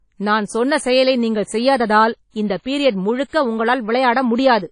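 Throughout the speech, the audio has likely passed through WMA compression at a low bitrate, which fits a setting of around 32 kbps. A transform codec squeezed this hard drops quiet spectral detail and lets its quantisation noise smear over long blocks. The result is plainly audible: nothing survives above 10.1 kHz, and the speech carries a ringing, washy quality with a hiss that swells and fades along with the signal.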